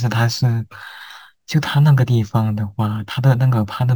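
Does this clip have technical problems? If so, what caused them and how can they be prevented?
Yes, there's crude rate conversion throughout: a gritty, inharmonic fizz riding on the louder and brighter speech, roughly 30 dB down. It sounds like samples were simply repeated to step up the rate, likely from 32 kHz to 44.1 kHz, with no filtering. Running the conversion through a proper band-limited resampler would prevent it.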